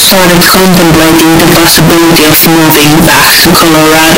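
Speech, and from start to finish it is buried under a wall of loud, harsh distortion, with pauses and soft passages blaring as strongly as the rest. That points to signed and unsigned samples being mixed up, likely in reading what fits 16-bit audio. With the top bit flipped, every pass of the waveform through zero turns into a leap across the full range, so even near-silent stretches become loud noise.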